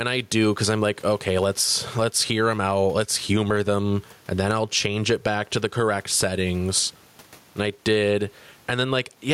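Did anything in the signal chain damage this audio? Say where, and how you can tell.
Yes. Gain pumping runs through the whole clip. The gain swings by roughly 10 dB, leaving the speech squashed. The likely cause is excessive input gain, with a fast limiter or compressor pulling down each peak.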